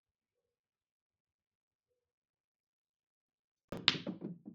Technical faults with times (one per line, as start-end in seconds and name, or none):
2.50-3.78 processor overload crackle